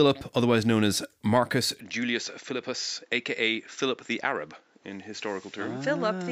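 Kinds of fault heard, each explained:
Input switched to a poorer device: from 1.80 s to the end, the speech abruptly loses its high end, with nothing above 7.6 kHz, and drops about 5 dB in level with no gap at the change, most likely because recording moved to a lesser microphone or headset path. A new noise floor appears roughly 35 dB under the speech. On a spectrogram the energy above 7.6 kHz is sharply cut off from 1.80 s onward, and the waveform envelope steps down there.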